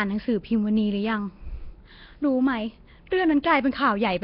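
Throughout, the speech has likely passed through Nellymoser compression, the old Flash microphone codec, heavily squeezed at a rate that fits about 22 kbps. Starved bands are filled with noise, leaving a rough, hissy halo and a smeared, underwater tone, with nothing above 5.3 kHz.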